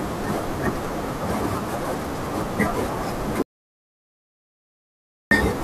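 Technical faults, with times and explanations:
3.42 to 5.31 s, audio dropout to silence: the speech cuts out mid-flow into dead silence with no room tone at all for 1.89 s. The input was likely lost through a disconnect or stray mute while the recorder kept writing silence, so that stretch is gone.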